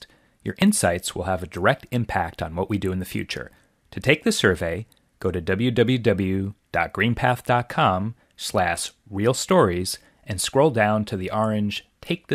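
Speech with two short skips, at 0.62 s and 4.79 s, each a jump where roughly 10 ms of sound vanishes and the two sides butt together, likely a dropped buffer (overrun). On a waveform each shows as a sudden discontinuity, on a spectrogram a thin vertical broadband line.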